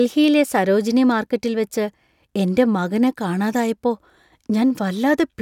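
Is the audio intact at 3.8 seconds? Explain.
Yes, the speech at 3.8 seconds plays through intact, with no fault at that moment.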